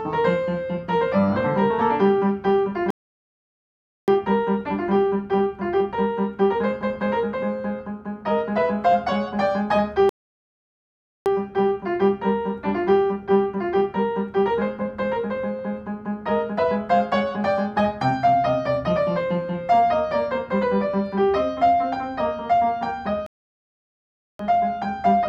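The audio has three rebuffering stalls, at 2.90–4.08 s, 10.09–11.26 s and 23.26–24.39 s. Each is a silence of about 1.1–1.2 s while playback waits for data, then resumes exactly where it stopped.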